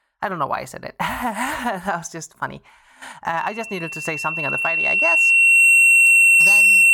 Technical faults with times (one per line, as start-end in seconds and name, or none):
3.37-6.94 loudspeaker feedback squeal